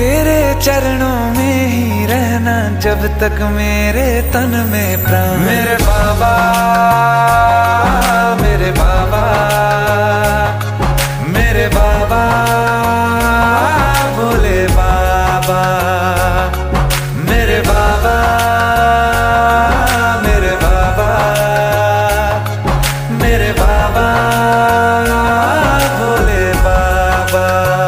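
No technical faults are audible anywhere in the clip.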